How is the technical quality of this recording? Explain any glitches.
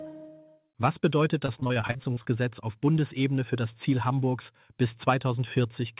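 The recording has one clear glitch: a burst of repeated packet loss giving a robotic sound. It runs from 1.46 to 2.27 s. Over that stretch the audio breaks up twelve times. Each time a packet went missing or arrived late, the receiver filled the hole by stretching the last sound it had. The longest hole is about 37 ms. About a third of the stretch is patched sound. The result is choppy, with small pieces missing. Throughout the clip, nothing reaches above 4 kHz, which fits a G.711 mu-law call path.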